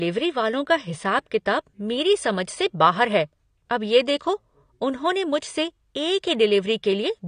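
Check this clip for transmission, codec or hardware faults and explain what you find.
One codec fault runs through the whole recording. The speech sounds dull and smeared, with nothing above 9.7 kHz and a fizzy, warbling edge on sibilants and held sounds. The likely cause is AAC compression: AAC-LC at a low bitrate, consistent with about 32 kbps, dropping high frequencies and coarsely quantising what remains.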